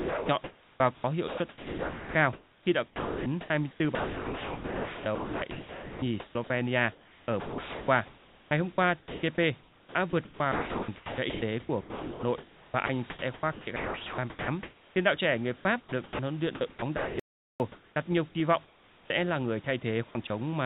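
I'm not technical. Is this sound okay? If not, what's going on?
No, there are four kinds of problem, all likely caused by the call's voice detector or the audio link.

Sound chopped by the voice detector: between 0 and 6.5 s, 6.92 and 9.23 s, 9.59 and 14.96 s, 15.56 and 16.19 s (between "đạo trẻ người" and "huấn luyện"), 16.55 and 17.96 s, and 20.09 and 20.3 s, the speech keeps breaking up. The sending side likely kept deciding nobody was talking, so pieces of speech were replaced by artificial hiss.

Audio dropout to silence: from 17.2 to 17.6 s, just before "đặt nhiều kỳ vọng", the sound cuts to dead silence for about 0.4 s, with no background at all. The audio input was likely lost briefly, and whatever was said then is gone.

Comfort noise in place of the background: from 18.65 to 19.1 s, the real room sound is swapped for a smooth, even hiss that is noticeably quieter. This is likely the receiving end filling a pause with made-up noise while nothing was being sent.

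Onset clipped by the voice detector: at 19.1 s, just after "đặt nhiều kỳ vọng", the start of "là người" begins abruptly. The detector was likely slow to notice speech resuming, so the first fraction of a second was dropped and hiss played in its place.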